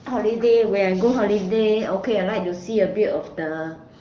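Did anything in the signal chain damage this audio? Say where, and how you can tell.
No, nothing in the chain has hurt this speech, and the crisp top end, topping out around 7 kHz, points to an AMR wideband (HD Voice) call link at one of its higher rates, somewhere near 18 kbit/s, doing its job as intended.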